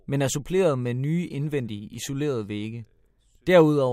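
No technical faults can be heard anywhere in the speech signal.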